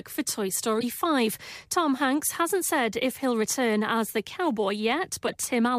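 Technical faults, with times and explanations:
0.76–0.84 s and 5.27–5.36 s, corrupt frame decoded: Two short glitches cut through the speech, each about 80 to 90 ms long. That span points to a few damaged codec frames in a row. The decoder played them anyway. Misread gains and codes put energy at the wrong frequencies. The first peaks near about -20 dBFS, the second louder, near about -15 dBFS.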